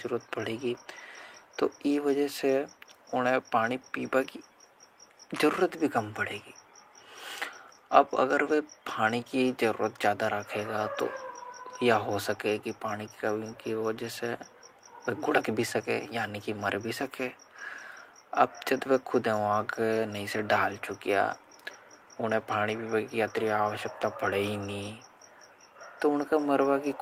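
No technical faults are audible anywhere in this speech recording.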